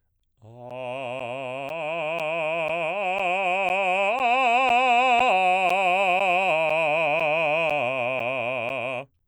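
A recurring stall on the USB bus or in the audio driver, every 0.5 s from 0.20 s to 9.20 s, causes periodic USB or driver dropouts. Each stall drops around 10 ms of music and leaves silence, heard as about twenty evenly spaced ticks.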